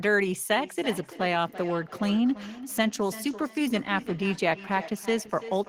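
From 0.52 s to the end, speech returns about every third of a second, thinner and ringing, at about -14 dB: feedback echo between two devices, their microphones re-sending each other's playback.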